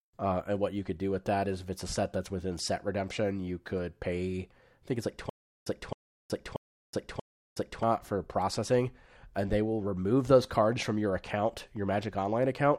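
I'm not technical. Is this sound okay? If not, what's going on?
No. Stutter with silent gaps from 5.30 to 7.83 s, right after "think it's like": a quarter-second scrap of speech repeats four times with dead silence between. The playback likely stalled and kept replaying its last fragment, so the speech before "for processing and they" is lost.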